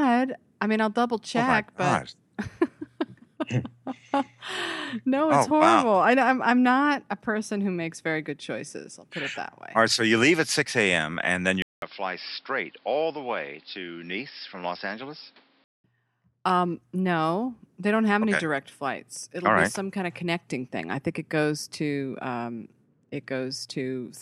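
At 11.62 s, a 200 ms gap. Then dull, quieter sound, nothing above 5.4 kHz, until 15.84 s. Likely input switched to a poorer device.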